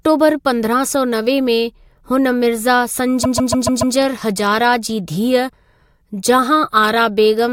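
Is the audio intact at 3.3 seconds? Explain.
No. Repeated frames run from 3.23 to 3.95 s, so 3.3 s falls inside the fault. One 144 ms block of compressed audio was played five extra times, which fits a run of about six short codec frames being sent or written again. The decoder reproduces the same fraction of a second over and over, so the speech stutters in place instead of moving forward. This adds 720 ms to the clip's length.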